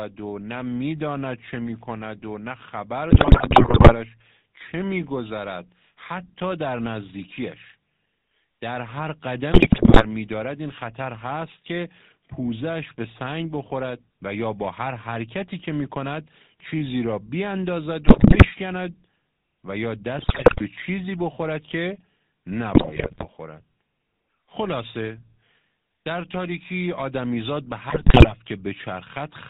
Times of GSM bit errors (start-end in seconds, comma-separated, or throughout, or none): 3.10-3.96, 9.52-10.05, 18.06-18.52, 20.18-20.61, 22.74-23.28, 27.90-28.33